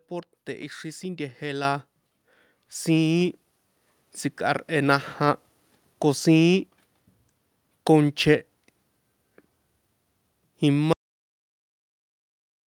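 At 1.65 s the speech and the room behind it jump up together by about 7 dB in a single instant, with no fade. That matched rise of voice and background is the mark of a microphone volume stepped up: the calling software judged the input too quiet and raised the device's input gain in one move rather than easing it up, so everything the microphone captured got louder at once.

At 10.93 s the sound cuts off abruptly into silence that runs to the end of the recording, with no room tone or hiss left underneath. This is an audio dropout to silence. The likely cause is that the input was lost, through a disconnected device, a broken link or an accidental mute, while the recorder kept writing silence, so whatever followed that moment was never captured.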